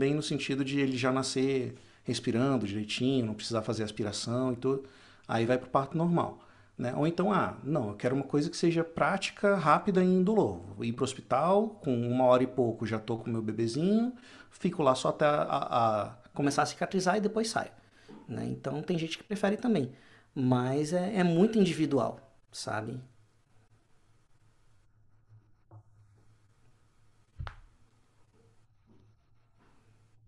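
From 16.4 s to the end, wrong sample rate: audio recorded near 22 kHz plays near 24 kHz, so speech runs 1.09 times fast and about 1.5 semitones high.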